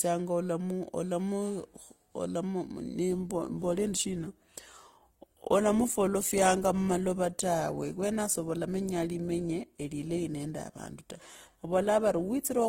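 Speech, with an adaptive stream at a lower bitrate. At 3.10 s the quality drops suddenly, with no gap, and stays low to the end at 12.69 s. Codec artefacts rise. The sound fits an Opus stream falling from about 64 to 16 kbit/s after the connection slowed.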